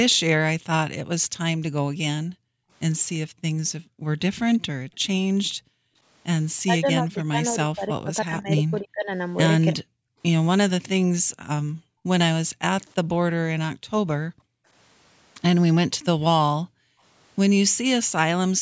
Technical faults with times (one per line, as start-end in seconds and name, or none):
2.23-6.04 background gated by the echo canceller
4.55-5.00 echo leak
6.60-9.86 speech suppressed in double talk
10.14-10.19 background gated by the echo canceller
11.25-12.61 background gated by the echo canceller
13.75-14.67 background gated by the echo canceller
16.63-17.02 background gated by the echo canceller